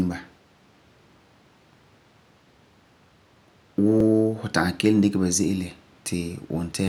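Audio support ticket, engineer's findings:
Clock drift buffer slips, 1.13 s to 6.88 s: regular click every 1.44 s during speech, about five in all. Likely two devices on independent clocks, roughly 700 ppm apart; the buffer between them fills or drains, dropping or repeating a few dozen samples each slip.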